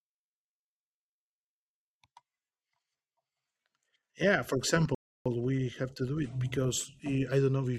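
A playback stall runs from 4.95 to 5.26 s, right after "yeah for": the speech cuts to silence for about 310 ms, then resumes with "we have to do". The player likely ran short of data or its thread was blocked, so output halted until it recovered.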